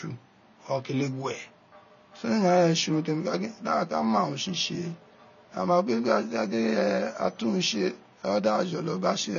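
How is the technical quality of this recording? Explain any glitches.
The recording has audible lossy-codec damage from start to finish, consistent with AAC compression. Throughout the speech, nothing is present above about 6.9 kHz, so the sound is dull and muffled, and sibilants and sustained vowels take on a warbling, fizzy texture. The likely cause is AAC-LC encoding at a low bitrate, fitting roughly 24 kbps. At that rate, the encoder lowers its cut-off and quantises frequency lines coarsely. On a spectrogram, this shows as a flat ceiling at 6.9 kHz and patchy holes between formants. The waveform looks ordinary.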